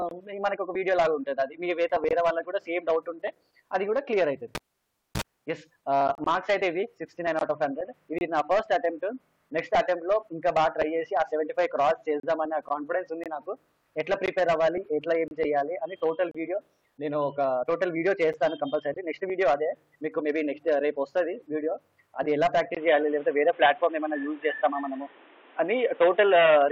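From 4.55 to 5.22 s a live cable was pulled and plugged in again. The connection breaks with a pop, leaving about 0.61 s of near silence. A 40 ms burst of 60 Hz mains buzz follows as only the tip touches, then a second pop as the sound returns.

Next come gaps between stream segments. The time stamps of consecutive one-second segments fail to meet, and the player fills each gap with silence. Hard-edged holes of 8 to 34 ms cut in at 6.15, 8.18, 12.20, 13.24, 14.26, 15.28, 16.31 and 18.33 s, each on a segment boundary.

At 22.75 s the input likely switched to a poorer device, which holds to the end. A 20 ms silence marks the switch. Then nothing passes above 3.8 kHz, so the sound turns dull and boxy, shifts in level by around 5 dB, and carries new background noise roughly 30 dB below it.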